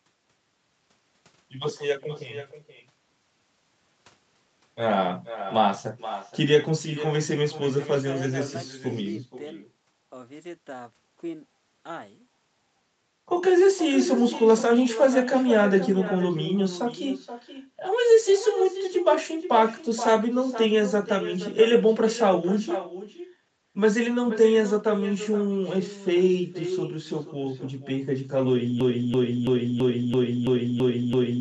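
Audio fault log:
Throughout, echo with no canceller: the far end's speaker feeds its mic, so every phrase returns about half a second later, roughly 12 dB quieter and thinner.
28.81 to 31.41 s, broken-record loop: a 333 ms chunk repeats eight times back to back until the end, likely a stalled stream resending its last buffer.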